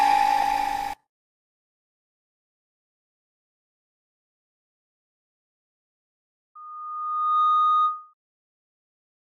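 From 6.55 to 8.14 s a loudspeaker feedback squeal builds over about a second into a 1.2 kHz tone near programme level, as the microphone-speaker loop exceeds unity gain.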